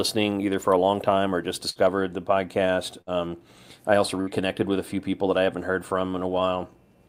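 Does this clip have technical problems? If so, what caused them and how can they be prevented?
Yes. Three bursts of packet loss break up the speech: at 1.69 to 1.78 s, after "long time or just"; at 3.01 to 3.10 s, after "the podcast"; and at 4.21 to 4.30 s, between "I also" and "with a few people". Each time the receiver stretches the last sound into a fading buzz or hiss for about 60 ms, then skips about 60 ms ahead. That filled tail separates it from a plain dropout, which would cut to silence. A larger jitter buffer with forward error correction would prevent it.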